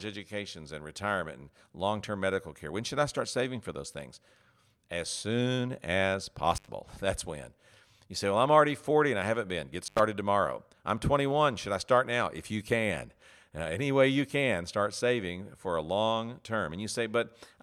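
Intermittent contact at 6.55 s and again at 9.85 s: a loose cable or plug briefly opens, cutting the speech for about 97 ms and 86 ms with crackle at each edge.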